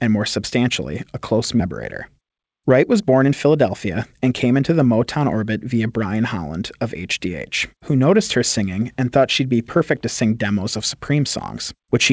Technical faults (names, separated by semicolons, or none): skip ahead; jitter buffer speed-up